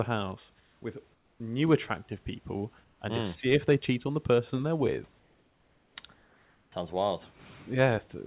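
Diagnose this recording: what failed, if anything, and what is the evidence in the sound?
Comfort noise in place of the background, likely from discontinuous transmission in call processing. At 0.6–0.82, 1.14–1.4, 2.84–3.0, 5.2–5.96 and 6.14–6.72 s, pauses turn to steady hiss about 2–6 dB quieter, a smooth, featureless band on a spectrogram.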